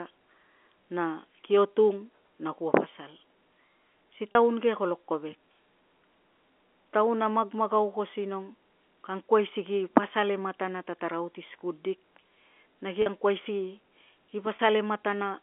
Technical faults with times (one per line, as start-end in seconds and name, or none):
4.32-4.35 packet loss with pitch repetition
13.02-13.06 packet loss with pitch repetition
14.56-14.59 packet loss with pitch repetition